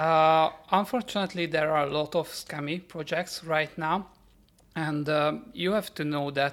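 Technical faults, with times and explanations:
No technical faults can be heard in the speech. Nothing in the recording calls for a time or an explanation.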